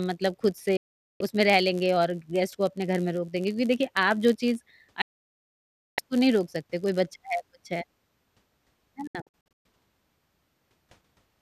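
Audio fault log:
throughout, filter restarted on every block: a steady buzz at about 86 Hz rides under the speech and swells and fades with its level. Each block starts from silence and leaves a small tick, which fits a 512-sample block. It tracks loudness, unlike constant mains hum.
0.77–1.21 s, digital broadcast dropout: the speech cuts to silence within 3 ms for 0.43 s and resumes mid-flow, with that stretch gone. It is a clean mute rather than crackle or noise, so it is lost frames, not a weak analogue signal.
5.02–5.99 s, digital broadcast dropout: a longer hole of 0.96 s, again with a 3 ms fade to true silence and the speech picking up later rather than continuing. Nothing is smeared or repeated, which separates muting from concealment that stretches or loops sound.
9.07–9.65 s, digital broadcast dropout: this one breaks into several short holes spread over 0.58 s, the longest 0.12 s, totalling 0.36 s missing. 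The stuttering gaps show frames failing intermittently, with the receiver muting each bad frame rather than dropping out once.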